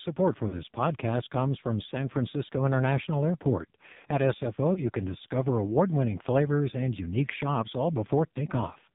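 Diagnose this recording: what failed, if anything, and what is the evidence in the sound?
The speech has passed through the AMR narrowband mobile codec, a codec-stage fault that runs through the whole clip. Nothing is heard above 4 kHz, and the damage is heavy: the voice is buzzy and synthetic. That points to one of AMR-NB's lowest modes, around 5.9 kbps. At that rate, each 20 ms frame gets only a coarse vocal-tract filter and a few excitation pulses, so the fine detail of the voice is lost.

Lost AMR speech frames appear at three points, a network or radio-link fault. From 0.48 to 0.56 s the sound is drawn out and fades, consistent with about 40 ms, two frames, being lost. Dips at 4.74 to 4.89 s and 8.32 to 8.37 s each fit a single lost 20 ms frame. The frames failed their checks, so the decoder repeated the last good pitch and filter settings at falling gain, then had to recover roughly.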